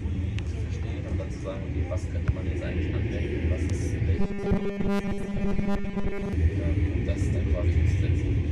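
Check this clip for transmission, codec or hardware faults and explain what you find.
One fault turns up: robotic sound from repeated short buffers, from 4.19 to 6.33 s. The audio hardens into a stiff metallic buzz at 200 Hz. Incoming data likely stalled, and most of that stretch got patched by looping a 5 ms chunk.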